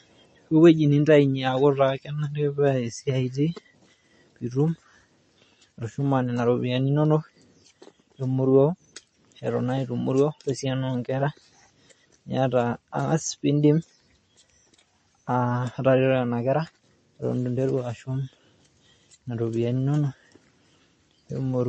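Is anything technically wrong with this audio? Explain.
Yes. Throughout the speech there is plainly audible MP3 compression damage, consistent with a low bitrate around 32 kbps. Nothing remains above 8.3 kHz, where a spectrogram shows a flat ceiling. Weak frequency lines are likely zeroed frame by frame, leaving flickering holes below it and a watery, swirling sound.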